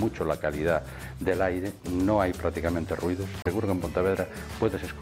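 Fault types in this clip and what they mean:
Damaged data in a compressed stream: corrupted bytes make the decoder lose sync and hunt for the next frame, heard as a brief chirp, squawk, click or short hole from 3.40 to 3.47 s.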